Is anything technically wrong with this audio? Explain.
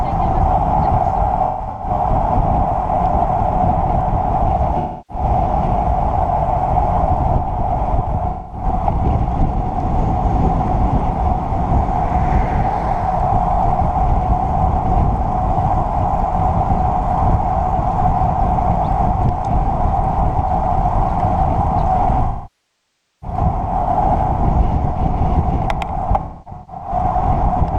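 Yes, there is AAC frame loss with concealment at 1.46 to 1.91 s, 4.79 to 5.24 s, 8.29 to 8.65 s, 22.24 to 23.37 s and 26.21 to 26.91 s. At each point, stretches of coded audio never arrive. The decoder fills the gap from the last good spectrum instead of leaving a hole.

The short losses sound like smeared, noisy or phasey patches. Those are about 0.21 to 0.30 s in total at 4.79 s and 8.29 s. At 1.46 s, about 0.26 s is lost, scattered over 0.34 s, with the longest run around 0.15 s. At 26.21 s, about 0.43 s is lost, spread over 0.6 s, with a run near 0.3 s. The roughly 0.98 s loss at 22.24 s goes on long enough to decay towards silence before the sound fades back in.

A plain dropout would snap to silence and usually click at the edges. This fault instead blurs the audio and then fades out gradually.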